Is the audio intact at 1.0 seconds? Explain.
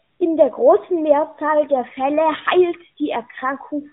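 Yes, the speech at 1.0 seconds is intact, with no dropout, click or other fault at that moment, only the narrowband sound of the AMR-NB mobile codec carrying it.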